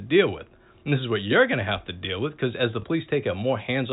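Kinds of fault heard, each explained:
Packet loss with last packet repeated: at 2.82 s, just after "with because as the", the sound briefly gives a small blip lasting about 20 ms. This fits one 20 ms packet that never arrived, so the receiver replayed the previous packet to fill the gap. The telephone band, topping out near 4 kHz, frames it.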